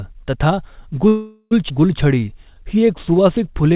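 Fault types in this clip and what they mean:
call audio freeze: From 1.08 to 1.53 s the speech hangs on its last sound, which trails off as a fading buzz and then about 30 ms of silence before picking up where it stopped. That's likely packets held up in transit while the jitter buffer ran dry.
skip ahead: At 1.69 s playback jumps forward with almost no gap, dropping roughly 0.3 s of speech and butting the two sides together. Some audio got discarded while later packets were already queued, so it lurches rather than pauses.
jitter buffer slow-down: From 2.04 to 3.74 s the speech drags at about 91% speed, with pitch unchanged, stretched by 156 ms overall. The buffer was topping up its reserve by repeating single pitch periods over and over, so sounds come out drawn-out.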